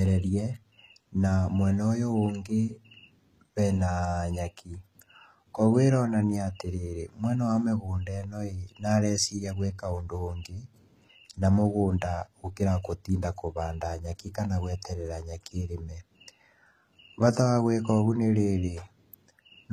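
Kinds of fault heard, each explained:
HE-AAC compression: the treble here sounds rebuilt rather than captured, likely from HE-AAC's band replication copying lower bands upward, so the speech's s sounds come out gritty and lispy, plainly audible throughout, and the damage level fits a very low bitrate around 20 kbps.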